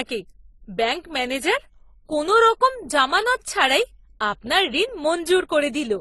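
Throughout, the speech was likely encoded twice by lossy codecs, consistent with AAC-LC followed by Opus at low bitrates. This is transcoding between lossy codecs: Opus spends bits reproducing the earlier artefacts while adding its own, so two kinds of smearing overlap, and nothing survives above 12.1 kHz.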